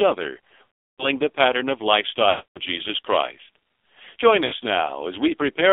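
Throughout, the speech sounds buzzy, synthetic and boxed in, with nothing above about 3.6 kHz. That is heavy damage from the AMR narrowband mobile codec, consistent with its low 5.9 kbps mode.

From 0.70 to 1.08 s, just before "the pattern of", the sound smears into a drawn-out warble and fades to silence. From 2.30 to 2.60 s, right after "the pattern of", it happens again. At 4.46 to 4.54 s there is a brief dip. These are lost AMR speech frames: the decoder stretched the last good frame with falling gain for about 340 ms, 260 ms and 60 ms.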